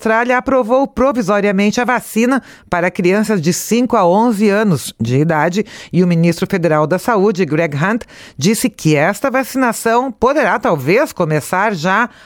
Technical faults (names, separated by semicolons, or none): none